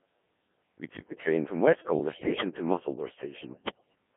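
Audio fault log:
Throughout: Codec 2 vocoder. The speech is rebuilt from sine waves driven by pitch, voicing, energy and a coarse spectral envelope rather than the original waveform, giving a heavily robotic, buzzy sound, band-limited to 150 Hz to 3.4 kHz, consistent with a 1.3 kbit/s mode.
1.78 to 2.44 s and 3.44 to 3.95 s: bit errors on digital voice radio. Just after "took the train from", and again later, around 7 percent of bits are flipped across runs of frames. This throws pitch, level and tone colour around, so the synthetic speech jumps into warbles, bleeps and robotic gibberish.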